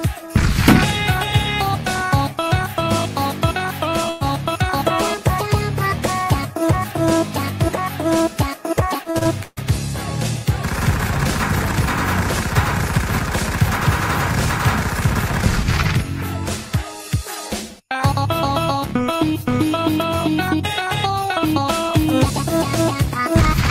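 At 4.09 s a burst of packet loss begins and lasts until about 4.34 s. The receiver bridges a 113 ms hole by extending the last sound and fading it down. Playback then resumes with 120 ms of audio skipped.

From 9.03 to 9.59 s, repeated packet loss produces robotic, choppy sound. Five separate gaps, the longest 139 ms, are each patched by extension, concealing 42 percent of that span. About 240 ms of audio is lost across the stretch.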